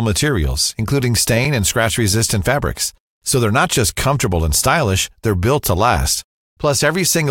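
It's a speech clip with one gap between chunks at about 3.95 s, right after "not just" and before "comfortable and stylish they're": a hard-edged hole of about 7 ms where playback stops and restarts. Nothing's lost; the join between chunks just came out with a bit of silence, pointing to chunks of about 2.5 s.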